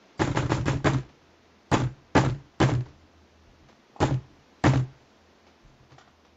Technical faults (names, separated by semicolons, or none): none